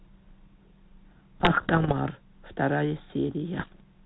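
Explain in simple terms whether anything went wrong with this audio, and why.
Something did go wrong, twice: from about 1.40 to 1.97 s and again from 3.55 to 3.81 s you get pops and rough, crackly bursts. Those are bit errors on an ADPCM link. Scrambled bits throw the phone-style decoder off briefly, so each glitch rings on for a moment.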